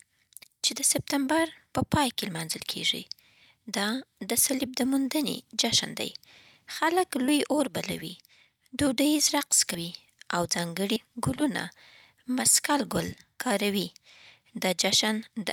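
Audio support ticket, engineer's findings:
Compressed frames skipped at 7.28 s, 9.74 s and 10.96 s in speech, with the audio jumping ahead by roughly 30 ms, 70 ms and 100 ms. These jumps fit one, two and three dropped 32 ms frames. Probable component is the decoder or the file, with frames missing or rejected as damaged.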